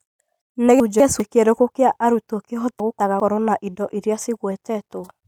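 At 0.8 to 1.2 s, and again at 2.8 to 3.2 s, the speech jumbles briefly. These are chunks out of order. A 200 ms chunk plays one slot late, after its successor. Nothing is lost, but each swap adds three hard joins.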